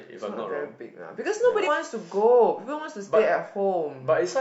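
At 1.63 to 1.68 s, compressed frames are skipped. About two frames, each 46.4 ms, never reach the output, so the speech jumps ahead by roughly a tenth of a second.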